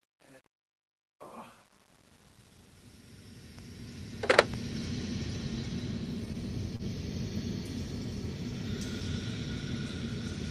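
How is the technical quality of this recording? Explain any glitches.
The recording has two technical faults: a gritty fade-in at the start and a brief stall later on.

From 0.00 to 4.85 s there is truncation distortion on the fade. The fade-in runs until 4.85 s, but the gain stage that shaped it kept too few bits and added no dither. At low levels the waveform collapses into a handful of coarse square steps, which fits roughly 10-bit resolution. The quietest part, 0.00 to 4.35 s, is the worst. It sounds grainy.

At 6.76 to 6.82 s there is a short stall from a late packet. The audio travelled a call path through the Opus codec, with the top end limited to about 12 kHz. One packet arrived late, and the jitter buffer ran dry. The receiver filled the gap by holding the last sound for about 35 ms, then resumed where it left off. Nothing is lost. A sound simply hangs a moment too long, with a slight buzzy wobble.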